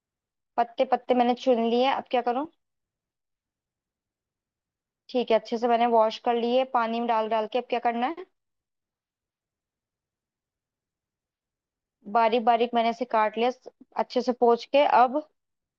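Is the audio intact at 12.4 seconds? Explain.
Yes, the speech at 12.4 seconds is intact, with no dropout, click, distortion or other fault at that point.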